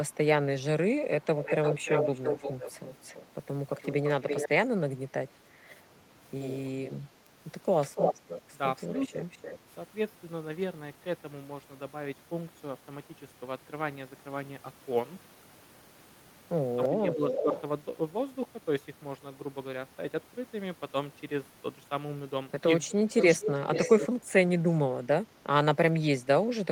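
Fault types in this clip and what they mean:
Echo leak: at 1.24–4.49 s, 5.7–5.76 s, 7.81–9.59 s, 16.82–17.62 s and 23.19–24.08 s, a delayed copy of the speech returns 291 to 438 ms late. It is only slightly quieter than the speech, except a faint trace near 5.7 s. The likely cause is a far-end loudspeaker echo that the canceller did not remove.
Bit error spike: at 7.27 s, a single sample jumps sharply and snaps back, giving one isolated broadband tick unrelated to the speech. This fits one flipped bit in a digital sample value, whether in memory or on a link.
Speech suppressed in double talk: at 16.89–17.51 s and 22.88–24.27 s, the speech dips by roughly 10 and 15 dB while the echo is also present. The speech is affected for roughly 0.4 and 0.5 s in total. The likely cause is an echo canceller that turned down both signals when it could not separate them.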